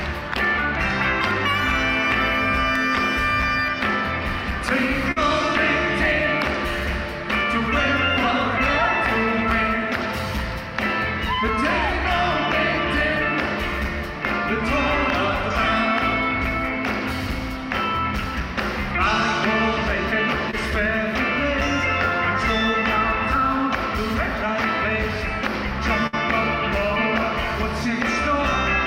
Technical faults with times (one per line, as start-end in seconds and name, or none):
5.11-5.18 burst of packet loss
20.51-20.55 short concealed packet loss
26.07-26.15 burst of packet loss